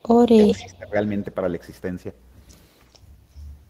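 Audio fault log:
0.00–0.96 s, speech suppressed in double talk: the speech dips or cuts out for roughly 0.7 s in total, at worst by about 25 dB. This is likely an echo canceller muting the near talker while the far side was also talking.
0.44–0.64 s, echo leak: a delayed copy of the speech, lagging about 319 ms and sitting roughly 10 dB under it, is likely loudspeaker pickup that the far end's echo canceller did not fully remove before sending it back.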